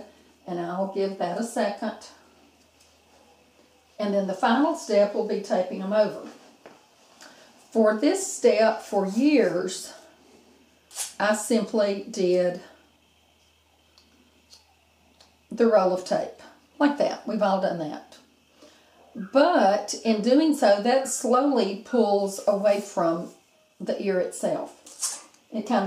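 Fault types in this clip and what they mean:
No faults are audible.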